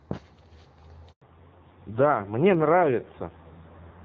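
Speech that cuts out abruptly at 1.12 s and stays silent until 1.22 s, a 100 ms handover gap where the call switched networks and no speech frames arrived. From 1.22 s to the end everything above 4 kHz is missing and the voice turns dull and rough, a fallback to narrowband that fits a drop from AMR-WB (HD Voice) at 12.65 kbit/s to AMR-NB at around 5.9 kbit/s; before the switch, the wideband codec shows only light coding damage.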